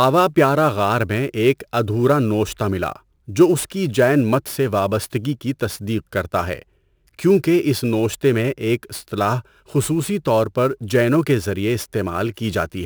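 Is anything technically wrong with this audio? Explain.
Yes. Sample clock jitter runs through the whole speech clip. The converter's clock wanders by roughly ten microseconds, so each sample is captured a little early or late at random. The resulting error scales with how steeply the waveform is changing, sitting only around 25 dB below the signal. It comes through as a grainy hiss riding on the speech, strongest on loud passages and sharp high-frequency sounds like sibilants, and dropping away in the pauses.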